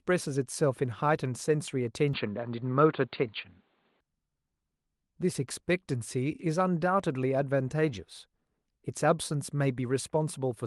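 Speech that turns dull and band-limited from 2.13 to 4.01 s, with nothing above 4.7 kHz, a level shift of around 5 dB and a faint new background noise, then clears. The likely cause is an input switched to a poorer device. The changed noise and level, not just lost treble, set it apart from simple filtering.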